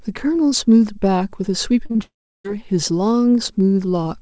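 From 1.86 s to 2.01 s there are three back-to-back bursts of short concealed packet loss: 1.86 to 1.91 s, 1.91 to 1.96 s, and 1.96 to 2.01 s. Each burst is a gap of about 40, 40 and then 20 ms that arrived too late for the decoder. The receiver papered over each hole by extending the preceding sound and then crossfading back. Chained together, they give a smeared, wobbling stretch in the speech.

At 2.03 s the speech cuts out until 2.46 s. This is likely a long network dropout, where nothing arrived for over four tenths of a second. The gap opens with a short concealed tail that fades as a buzz or hiss. Then about 0.34 s of near silence follows. The speech resumes at 2.46 s with that stretch simply missing. Throughout, the call codec caps the band at 8 kHz.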